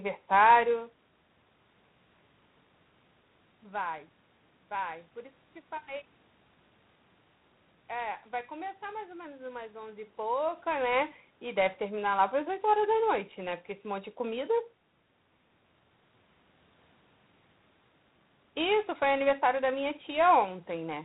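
From start to finish the speech carries G.726 ADPCM coding damage, a harsh, rasping hiss riding on the voice that fits the 24 kbit/s mode. On a spectrogram everything stops at 4 kHz, with grainy noise filling the band beneath that rises and falls with speech level.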